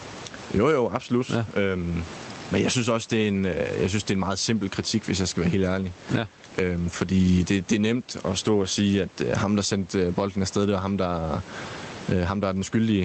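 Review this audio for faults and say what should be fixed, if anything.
Gain pumping runs throughout: the gain swings roughly 20 dB with louder speech, likely from excessive microphone gain driving a fast limiter. Reduce input gain so the limiter rarely engages.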